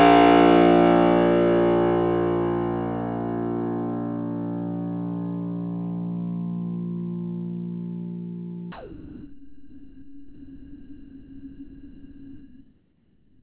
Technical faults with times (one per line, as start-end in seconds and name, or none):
8.72-13.42 sound dropped by the voice detector